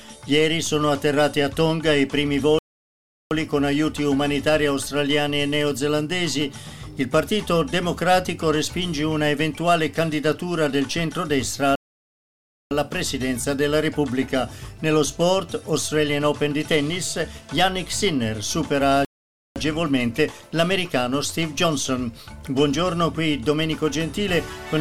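The sound cuts to silence mid-flow three times: at 2.59 s for about 0.72 s, at 11.75 s for about 0.96 s, and at 19.05 s for about 0.51 s, each gap ending when the audio picks up again. These are playback stalls. The likely cause is the player running short of buffered data, or its output thread being held up, so nothing reached the output until it caught up.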